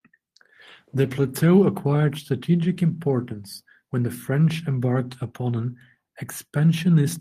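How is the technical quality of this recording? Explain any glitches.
No technical faults are audible anywhere in this recording.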